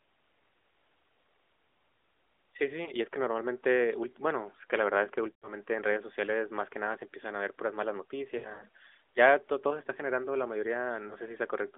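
Lost AMR speech frames at 2.84–2.92 s, just before "y es que normalmente"; at 5.32–5.52 s, after "la verdad es que"; at 8.38–8.65 s, after "a ver puras malas"; and at 11.08–11.15 s. The decoder fills each gap by repeating the last pitch and vocal tract settings at falling gain. The result is brief warbling dips, and the 5.3 s and 8.4 s spots sound drawn out.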